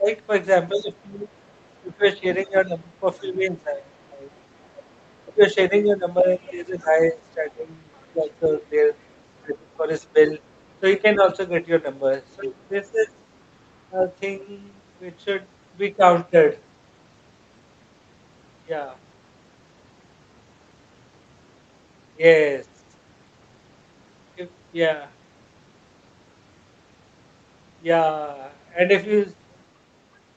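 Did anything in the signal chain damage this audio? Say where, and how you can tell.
Yes. Speech is suppressed in double talk at the call-processing stage. From 0.0 to 4.19 s and 5.25 to 14.07 s, speech dips by about 10 dB. This is likely the echo canceller ducking both talkers.

The other side's voice leaks through at 0.79–1.8, 4.75–5.22, 6.45–6.84, 7.94–8.02 and 9.43–11.16 s. It sits about 20 to 40 dB down. This is likely loudspeaker echo the canceller missed.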